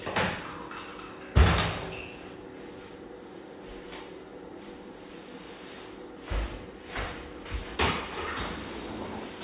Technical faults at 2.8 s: none

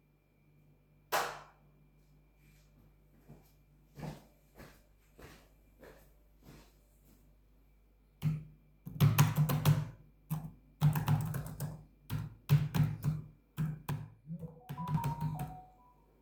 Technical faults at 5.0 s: none

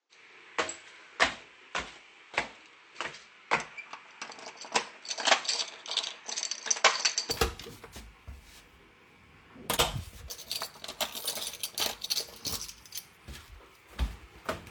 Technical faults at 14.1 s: none

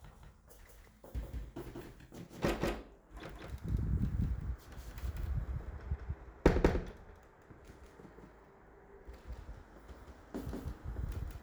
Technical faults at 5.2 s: doubled audio track

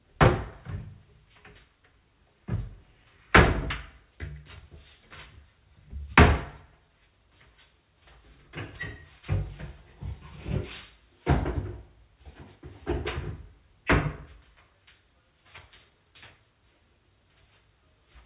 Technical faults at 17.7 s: none

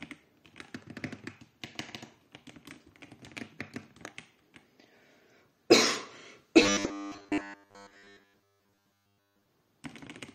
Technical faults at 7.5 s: robotic sound from repeated short buffers

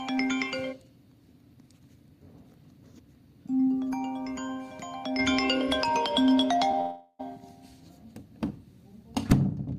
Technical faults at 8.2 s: none

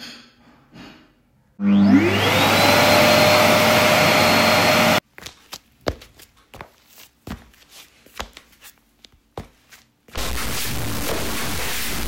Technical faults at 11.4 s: stuck bit

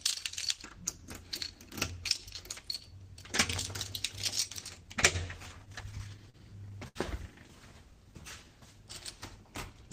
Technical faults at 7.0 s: short stall from a late packet

